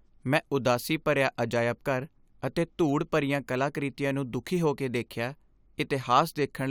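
No technical faults can be heard anywhere in it.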